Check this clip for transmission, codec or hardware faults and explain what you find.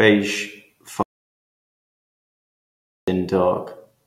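One fault is present: an audio dropout to silence from 1.03 s to 3.08 s, removing about 2.05 s of the speech. The input was likely lost upstream, through a disconnected device, a broken link or an accidental mute, while the recorder kept writing silence. The speech stops abruptly mid-flow and resumes just as suddenly, and the gap between is silent with no room tone, so whatever was said there is gone.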